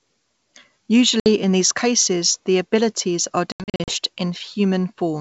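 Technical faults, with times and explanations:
1.20–1.27 s, packet loss on an ADPCM call: about 60 ms, roughly three packets, drops to silence just before "in these cases the". The waveform goes flat with sharp edges and the spectrogram shows a clean vertical gap. The decoder's predictor and step size lose sync, so the sound returns slightly distorted.
3.52–3.95 s, packet loss on an ADPCM call: after "cases the abilities are", about 240 ms goes missing in scattered gaps over 360 ms, the longest run 80 ms, roughly ten packets. The spectrogram shows repeated hard-edged blank stripes, and each restart brings brief distortion while the adaptive state resettles.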